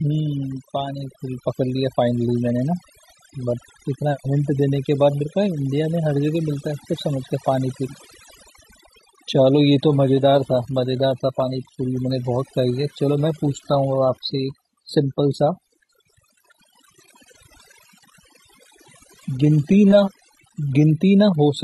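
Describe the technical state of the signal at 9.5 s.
At 9.53 s the stream switches to a lower-bitrate version, an adaptive stream at a lower bitrate. It stays there to the end. The quality drops suddenly, with no gap. Nothing is left above 14.9 kHz, so the treble drops. That fits a step down from about 96 kbit/s AAC to about 20 kbit/s HE-AAC.

Overdone noise removal also runs through this point. The noise reduction is set too strong. It pulls single frequency bands down hard wherever they sit near the noise level, and quiet parts of the speech go too. The background drops and breaks up into twinkling specks.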